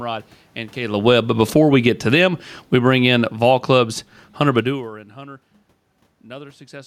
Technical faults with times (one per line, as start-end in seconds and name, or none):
0.79-4.98 automatic gain falling